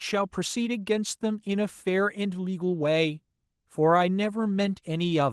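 Nothing in this speech clip is technically faulty. It has come through Opus voice compression running in hybrid mode with full audio bandwidth, and the slight coding texture on the sound fits a bitrate of around 20 kbps.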